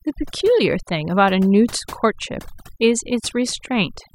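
Speech, with overdone noise removal running through the whole clip. A noise reducer set far too hard is pulling individual frequency bands down to nothing whenever they sit close to its noise estimate. The pauses drop to near silence speckled with twinkling bits, and the quieter parts of the voice are stripped away. Unlike a noise gate, which mutes everything at once, this works band by band, so the twinkling fragments survive.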